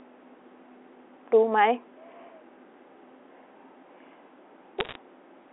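Bit errors on a digital phone line appear from 4.80 to 4.98 s as a short burst of sharp ticks and crackle over otherwise unchanged speech. The audio travels as logarithmically coded 8-bit samples, as on a G.711 A-law line. When a transmission error flips a bit, that one sample jumps to a wrong value. Hits on the sign or high-order bits produce the loudest clicks. The error rate here is a fraction of a percent.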